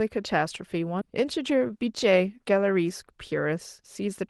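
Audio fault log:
1.01–1.03 s: skip ahead. The speech jumps forward with no gap and no fill. Roughly 0.7 s of audio is gone, and the two sides of the cut are butted together. Later audio was already waiting when this stretch was thrown away, so playback simply resumed further on. The jump also removes about 0.7 s of delay at once. The result is an abrupt splice, with sound from either side of the cut joined directly.
1.57–1.88 s and 3.06–4.23 s: jitter buffer speed-up. The speech runs faster, but its pitch stays the same. The first stretch plays at about 115% speed and loses roughly 50 ms. The second is gentler, at about 105%, and loses roughly 70 ms over a longer span. The buffer held more audio than it wanted. To cut that backlog, it removed many short pieces, each a pitch period or a few long. This makes the delivery sound hurried. The Opus coding of the call path, with its cut-off near 12 kHz, stays the same across these stretches.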